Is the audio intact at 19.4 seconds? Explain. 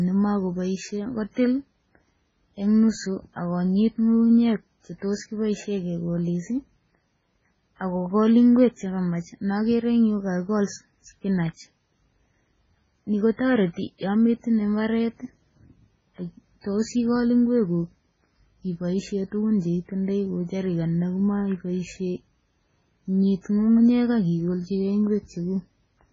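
No. At 19.4 seconds, as throughout the speech, the sound is watery and swirling, s sounds chirp metallically, consonant attacks smear, and nothing is left above 7.6 kHz. The likely cause is heavy MP3 compression at a very low bitrate, which fits something near 16 kbps. Starved of bits, the encoder cuts all treble at a fixed point and drops quiet frequency lines that then flicker on and off between frames.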